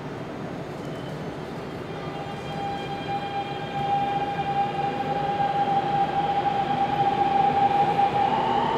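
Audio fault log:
No faults heard anywhere in this audio.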